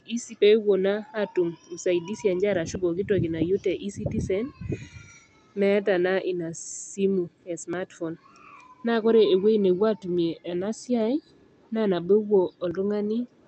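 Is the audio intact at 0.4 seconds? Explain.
No. A skip ahead occurs at 0.41 to 0.43 s. Roughly a second of audio was dropped, likely at jitter buffer overflow, so playback jumps forward with no gap.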